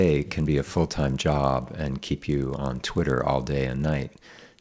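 Throughout the speech, the resampler restarted on every block, treating each 20 ms block as if nothing came before or after it. The edges carry small errors, so a 50 Hz buzz rides on the speech and stops in pauses, consistent with a 44.1 kHz to 16 kHz conversion.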